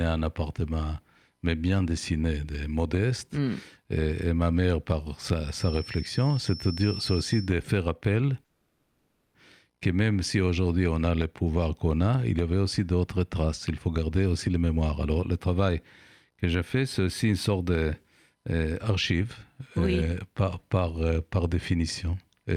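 From 5.47 to 7.53 s a feedback whistle sits behind the speech: a thin, steady tone at 5.4 kHz, around 15 dB below the speech, swelling and fading slowly in level. It is likely caused by a loudspeaker-to-microphone loop running just short of feedback, so that one frequency keeps ringing without growing into a howl.

At 8.45 s a call audio freeze begins and lasts until 9.36 s. The speech stops advancing and the last sound is stretched out and fading for about 0.89 s, with no stretch of outright silence. The speech then picks up exactly where it left off, so nothing is lost, but from there it runs about 890 ms later than before. The likely cause is packets held up in transit, which left the jitter buffer empty until they arrived.

Four jitter buffer speed-ups follow: 13.88 to 15.69 s at 113% speed, 16.29 to 17.91 s at 111%, 18.35 to 20.11 s at 107%, and 21.05 to 21.40 s at 111%. In each, the receiver trims short pitch-period slices again and again to work off excess buffered audio. 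About 300, 200, 150 and 50 ms are removed respectively. Pitch stays the same, but the speech sounds hurried in all four stretches.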